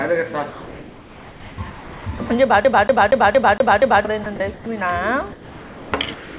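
From 0.5 to 1.58 s and again from 1.7 to 2.06 s, the quiet background between sounds turns into comfort noise in place of the background, likely because the sender's detector judged these stretches empty and stopped transmitting, leaving the receiver to synthesise a stand-in. The fill is smooth and featureless and drops about 3 to 4 dB. On a spectrogram, the textured background turns into an even, flat-topped wash, all confined below 4 kHz by the narrow call band.

At 2.18 s a brief piece of sound is cut away, likely sound dropped by the voice detector: a sound the detector mistook for background and replaced with noise. The waveform shows a tiny notch of flat, low-level fill where the sound's envelope should continue.

From 2.64 to 4.05 s the audio jams in the pattern of a CD stuck on one turn: the same 0.23 s slice plays six times with a short mute at each jump, giving a rapid, even stutter. 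The spectrogram shows identical blocks tiled side by side, separated by thin vertical gaps.

More sound dropped by the voice detector follows at 4.24 s, 4.36 to 4.4 s and 4.54 to 4.66 s, likely the detector again cutting off sound it took for background. Each drop leaves a short, flat stretch of noise in the waveform.

Comfort noise in place of the background returns from 5.32 to 5.92 s and from 6.14 s to the end, likely from the same discontinuous transmission, and sits about 2 to 4 dB below the real background as a uniform band on the spectrogram.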